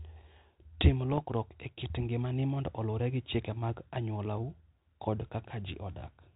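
From 1.12 to 1.22 s the speech breaks into pops and a short rough, gritty burst with brief jumps in level. These are bit errors on an ADPCM link, at a rate well under one percent. A flipped bit throws off the decoder's step size and predictor, so the damage rings on for some milliseconds instead of clicking once. Unlike packet loss, there is no gap or smoothed-over concealment, only corrupted sound riding over the 32 kbit/s-style G.726 band-limited audio.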